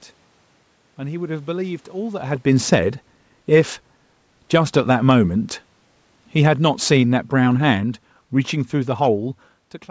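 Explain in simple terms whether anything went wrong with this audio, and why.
Something did go wrong, from about 6.32 to 9.34 seconds. The automatic gain control decided the input was too loud, or its background noise too strong, and slowly turned it down. You hear the voice and the room noise behind it sink together, gently, until about 9.34 seconds.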